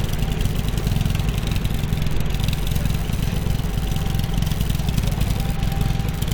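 Nothing stood out on listening to these sounds.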